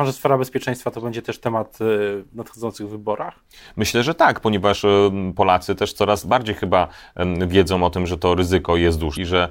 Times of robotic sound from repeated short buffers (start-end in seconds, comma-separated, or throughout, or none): none